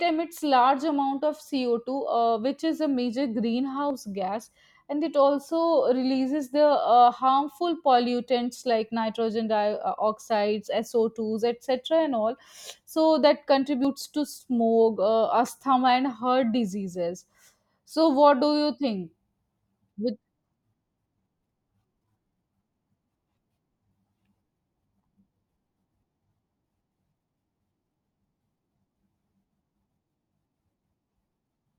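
At 3.90 s, just before "gas and it", and at 13.85 s, between "and all so that" and "to smoke uh", the speech jumps ahead by about 40 ms, likely a dropped buffer (overrun). The waveform shows an abrupt discontinuity with no gap, and the spectrogram a thin vertical broadband line.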